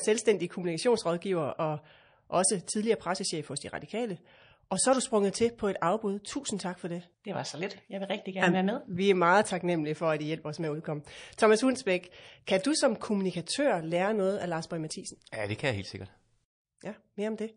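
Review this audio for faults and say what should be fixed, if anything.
The whole speech track has that watery, swirly quality, with smeared, chirpy sibilants. That's likely MP3 compression starved of bits, and the amount of damage fits a bitrate around 40 kbps. To prevent it, encode at a much higher bitrate or use a more efficient codec.

There's pre-echo before three sharp attacks: a short hiss at 2.64–2.67 s (32 ms), 6.57–6.59 s (26 ms) and 12.46 s (14 ms), rising about 14 dB, then about 12 dB twice. Noise spread across a 52 ms block leaks ahead of each onset, which suggests the encoder never switched to short blocks. To prevent it, use an encoder that switches to short blocks on transients.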